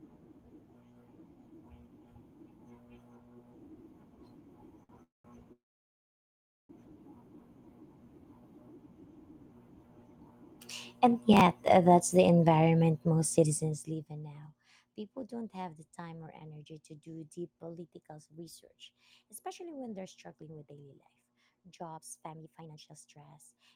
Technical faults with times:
4.83-4.91 short stall from a late packet
5.03-5.26 call audio freeze
5.52-6.71 call audio freeze
11.33-11.68 processor overload crackle
17.78-23.54 jitter buffer speed-up

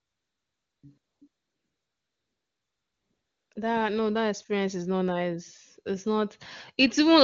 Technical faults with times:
0.00-3.55 AMR comfort noise

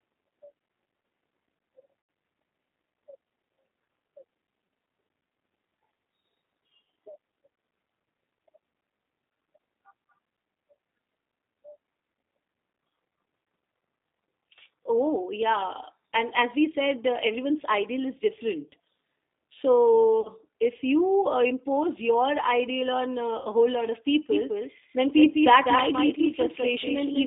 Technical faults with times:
0.00-27.26 G.729 codec
2.01-2.09 VoIP packet loss concealed by the speech codec
20.21-20.30 VoIP packet loss concealed by the speech codec
23.39-23.48 VoIP packet loss concealed by the speech codec
24.32-27.26 doubled audio track

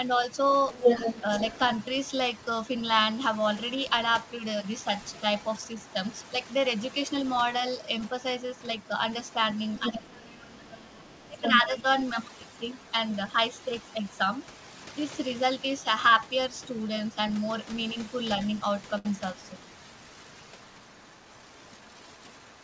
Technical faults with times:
0.00-22.63 overdone noise removal
0.70-2.81 other side's voice leaking through
3.73-6.94 other side's voice leaking through
8.41-11.61 other side's voice leaking through
9.88-11.85 speech suppressed in double talk
12.79-12.92 other side's voice leaking through
13.87-14.49 other side's voice leaking through
18.98-19.06 short stall from a late packet
20.83-22.63 other side's voice leaking through

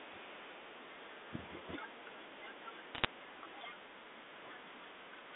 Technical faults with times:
2.95-3.05 bit errors on a digital phone line

